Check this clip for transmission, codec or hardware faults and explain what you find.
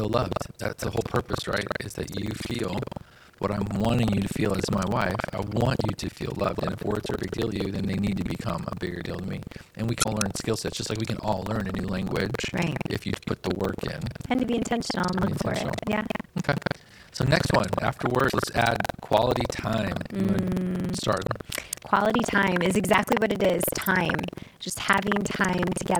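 One hardware fault runs through the whole speech clip: buffer tearing. A steady robotic rattle at about 21.5 Hz sits on the speech wherever it is present, which fits a 2048-sample buffer. Writer and reader have slipped, so roughly a fifth of each buffer replays audio from about 200 ms earlier, with hard joins on both sides.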